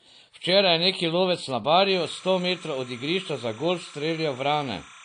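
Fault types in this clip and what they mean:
Low-bitrate audio saved at a high bitrate: The spectrum stops dead at about 9.8 kHz, with nothing above that line, and the artefacts of heavy perceptual coding are present throughout. This is likely a low-bitrate source, consistent with AAC at around 32 kbit/s, re-encoded to MP3 at a high bitrate near 256 kbit/s. The second encode adds bulk but cannot restore the discarded band or undo the earlier artefacts.
Timecode bleed: From 1.91 s, just after "je neki lovec na", to the end of the clip, a steady chirping warble sits behind the speech, roughly 25 dB below it. It alternates between two tones around 1 kHz and 2 kHz, the signature of linear timecode's biphase square wave. Its regular pattern fits 30 frames-per-second code leaking in from an adjacent track or cable rather than anything in the recorded scene.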